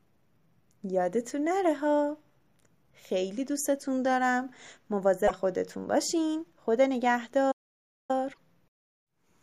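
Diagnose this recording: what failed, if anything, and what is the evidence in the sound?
The fault lies at the codec stage. At 5.27 to 5.31 s, and again at 8.32 to 8.38 s, the speech jumps forward and a brief stretch of damaged sound follows. Each stretch lasts about two MP3 frames of 26.1 ms. This is likely a broken MP3 bit reservoir. Frames were lost, so the next frames reached back for borrowed bits and decoded bytes belonging to other frames. That produced damaged output until the stream resynchronised.

The second fault is at the playback stage, in the buffer feeding the output. From 7.51 to 8.11 s the speech stops dead in mid-flow. The output is silent for about 575 ms. Then the sound resumes. The gap has no decoded garbage inside it. That points to a likely playback stall. The player ran dry of data or its thread was blocked, and the output stayed silent until delivery recovered.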